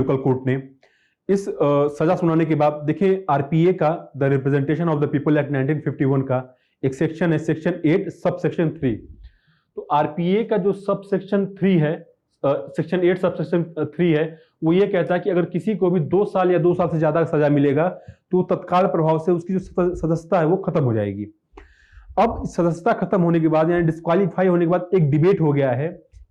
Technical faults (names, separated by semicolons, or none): gain pumping